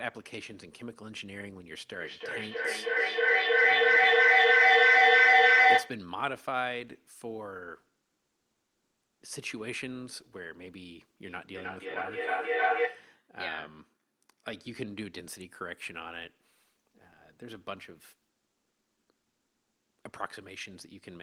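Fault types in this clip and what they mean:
Feedback echo between two devices: another device's playback re-enters the microphone, so words return about every third of a second, peaking about 17 dB over the speech.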